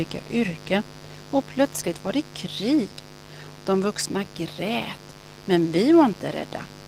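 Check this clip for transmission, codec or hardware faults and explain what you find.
Two faults run through the whole speech clip: a mains buzz and plainly audible Opus voice compression damage.

Mains buzz, throughout: sharp switching spikes from a dimmer, rectifier or poorly shielded cable get into the signal twice per cycle of 50 Hz mains. The result is a ladder of 50 Hz harmonics stretching up into the kilohertz range, sitting roughly 20 dB below the speech. It sounds like a constant raspy buzz under the voice that doesn't change when the talking stops.

Opus voice compression, throughout: the codec is running in its hybrid arrangement, with the SILK linear-prediction coder handling the band up to 8 kHz and a CELT layer covering the top of a fullband signal. The coarseness points to a low bitrate, around 16 kbps. At that rate the excitation is coded roughly, so the speech sounds hoarse and slightly robotic. 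The buzz underneath takes on a burbling, unsteady texture.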